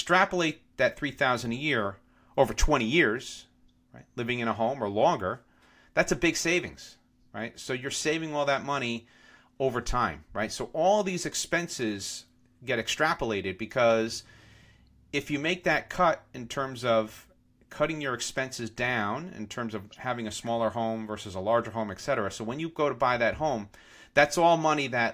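No technical faults can be heard anywhere in the speech recording; the signal stays steady and intact over its whole length.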